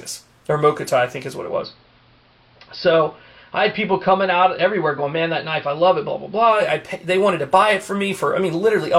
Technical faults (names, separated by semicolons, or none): digital radio blending to analogue